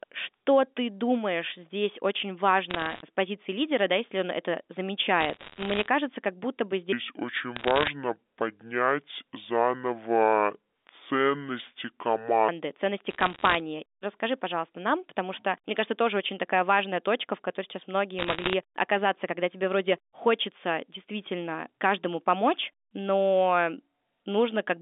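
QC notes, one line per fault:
2.70–3.02 s, 5.21–5.87 s, 7.56–7.88 s, 13.10–13.60 s, 18.19–18.54 s, bit errors on a digital phone line: short bursts of sharp ticks and crackle over intact speech, for example between "ты думаешь здесь очень" and "с позиции лидера да", and between "точка в которой сейчас" and "оказаться когда тебе вроде". Roughly 1 in 100 bits are flipped on the A-law line, somewhat fewer in the 7.56 s burst. Each flip corrupts a single sample, and hits on high-order bits, or on the sign of a loud sample, jump furthest and click loudest.
6.93–12.49 s, section at the wrong speed: starting after "кажется как будто бы", the speech drops to 0.606 times normal speed and about ten semitones lower, sounding slow, deep and dragged. It is likely the result of playback against the wrong clock, which shifts speed and pitch together until the normal rate returns.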